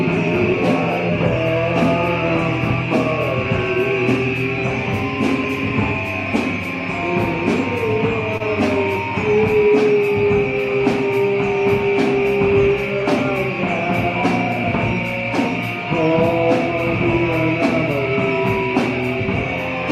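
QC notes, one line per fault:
8.37–8.42 s, short concealed packet loss: about 20 ms of audio never reached the decoder in time, and the receiver bridged the gap by extending the preceding sound for roughly 24 ms before crossfading back into the real signal, leaving a brief smear or wobble.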